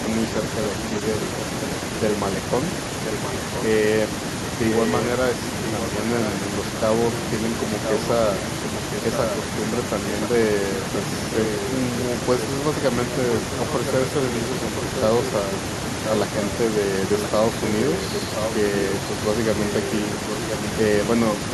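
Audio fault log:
11.45 to 15.02 s and 17.2 to 18.52 s, echo leak: A delayed copy of the speech comes back about 1.03 s after the original. It sits only a few decibels below the direct speech. The same delay in both stretches points to one fixed return path. The likely cause is a far end playing the call on a loudspeaker, with an echo canceller that failed to remove what its microphone picked up and sent that back.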